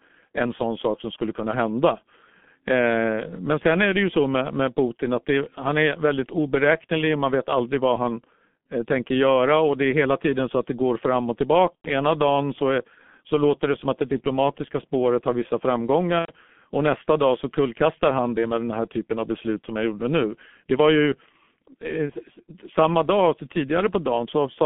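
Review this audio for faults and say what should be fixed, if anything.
G.723.1 codec, throughout the clip: the speech is confined to roughly 150 Hz to 3.5 kHz and is heavily damaged, which fits the 6.3 kbit/s mode. The codec sends a compact vocal-tract and pitch description every 30 ms instead of the waveform, so everything above the band is gone, and the slowly updated model smears fast transitions. The result is muffled, hoarse speech with soft, blurred consonants. Prevent it by using a wideband codec such as Opus or G.722 end to end, with no G.723.1 leg anywhere in the chain.

VoIP packet loss concealed by the speech codec, at 11.76 to 11.88 s, just after "det går fram och", and again at 16.19 to 16.32 s. Each gap lasts about 90 ms, which fits three consecutive 30 ms frames. The decoder filled the gap by continuing from its last pitch and filter with falling gain, so the speech is stretched into a fading sound that is muted by the third lost frame. 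The recovery frames build on that guessed state, so the speech stays weak or rough for a short while afterwards. Prevent it by adding forward error correction or redundancy, an adequate jitter buffer, and prioritising voice traffic on the network with QoS.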